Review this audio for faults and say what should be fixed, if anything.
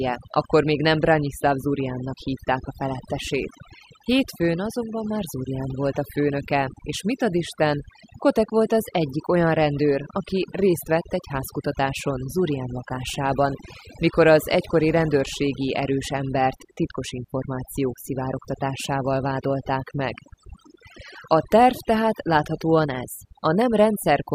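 Overdone noise removal runs through the whole speech clip. A noise reduction stage set too aggressively clamps individual frequency bands down whenever they sit near its noise estimate, so the background in the pauses drops and breaks up into twinkling specks and the voice loses its softer detail. On a spectrogram this shows as scattered isolated dots in the gaps and ragged, hollowed-out speech harmonics. Lowering the reduction amount and checking the result against the untreated recording would prevent it.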